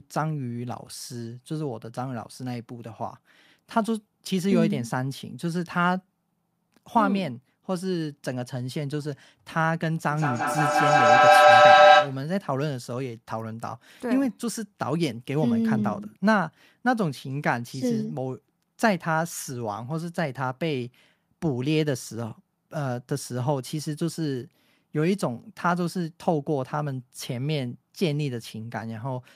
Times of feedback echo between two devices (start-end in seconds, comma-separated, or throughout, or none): 10.10-12.27